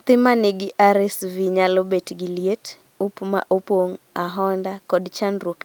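No technical faults can be heard anywhere in this speech recording.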